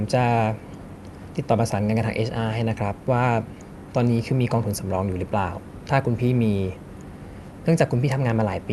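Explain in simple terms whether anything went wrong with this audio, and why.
Nothing went wrong here.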